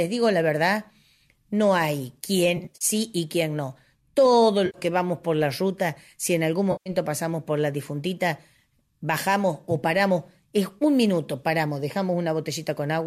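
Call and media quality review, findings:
AAC frame loss with concealment: smeared, noisy, phasey patches at 2.57–2.85 s (broken runs, longest about 50 ms), 4.66–4.78 s and 6.72–6.90 s. Decoder filling from the last good spectrum. No silent gap, unlike dropouts. Episodic, unlike the light, steady grain of the likely low-delay AAC.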